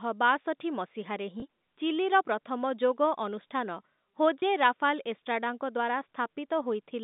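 At 1.40–1.42 s, between "ବାଷଠୀ ମସିହା ରେ" and "ଚିଲିର ପ୍ରଥମ ଯୋଗ ଅନୁଷ୍ଠାନ", and again at 4.40–4.42 s, there is packet loss with pitch repetition. Each time about 20 ms went missing, which fits a single lost packet, and the receiver filled it by repeating the last pitch period. This comes through as a brief held, buzzy blip.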